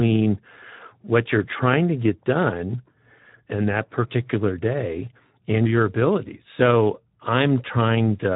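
From start to finish the speech carries Speex codec damage that is plainly audible. Nothing is present above about 3.9 kHz, so the band is narrowband and sounds boxed-in. With so few bits left to code the excitation, each frame's residual is only roughly matched, which makes the voice grainy and hoarse. That degree of coarseness fits a bitrate around 11 kbps.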